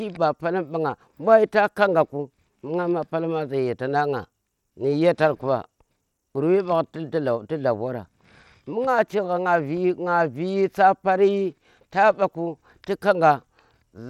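A speech recording with plainly audible codec damage from start to finish, most likely Bluetooth SBC compression. There's nothing above 17.5 kHz, and the whole thing carries that coarse, gritty edge you get when a simple sub-band coder runs short on bits. It sounds like something around 96 kbps, a small bit pool where the weaker upper bands get starved and everything else is quantised pretty roughly.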